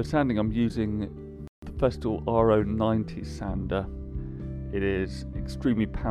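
At 1.48 s the audio halts mid-flow and stays silent until 1.62 s, a gap of about 150 ms. This is a playback stall, likely caused by the player running short of buffered data or its output thread being held up. When it recovers, the sound carries on.

From 1.62 s to 3.10 s the player makes up the lost time with time-compressed catch-up, running the backlog at 1.1 times normal speed. It trims short slices and cross-fades across the joins, so the audio sounds slightly hurried while the pitch stays where it was. That unchanged pitch separates it from a plain speed-up or a sample-rate error, which would raise the pitch along with the tempo.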